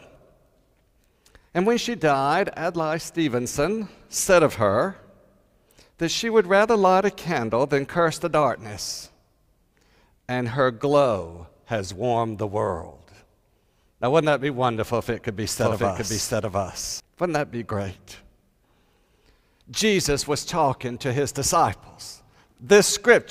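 A doubled audio track runs from 15.6 to 17.0 s: a second, full-band copy of the sound trails the original by roughly 0.7 s at about the same loudness, so everything in that stretch is heard twice. The copy carries no decay or room colour and cuts in and out abruptly at the span's edges. The likely cause is the same signal being captured again through a slower path, or an edit leaving two out-of-step copies stacked.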